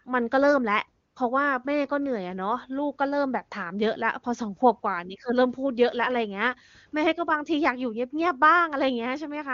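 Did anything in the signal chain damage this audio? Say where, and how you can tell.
Yes, in the codec's discontinuous transmission. From 1.07 to 1.15 s there's an 80 ms patch of AMR comfort noise: the sender decided nothing was being said and stopped sending speech frames, so the receiver filled that gap with synthetic noise built from a rough level-and-spectrum description. You hear the real background drop out and a smooth, steady hiss switch in briefly. The AMR wideband coding itself sounds clean, which points to a high-rate mode.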